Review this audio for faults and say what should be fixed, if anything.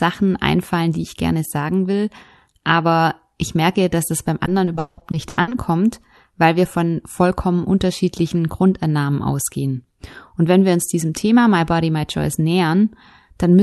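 Repeated packet loss (robotic sound) runs from 4.45 to 5.53 s, just after "merke dass das beim". Nine gaps, the longest 180 ms, were patched by extending the preceding sound, so 41% of that stretch is concealment, heard as choppy fragments with pieces missing. A more stable network path, a deeper jitter buffer and Opus in-band FEC would keep this from recurring.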